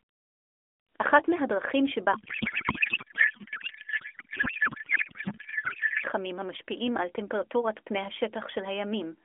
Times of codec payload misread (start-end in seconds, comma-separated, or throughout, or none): 2.14-6.04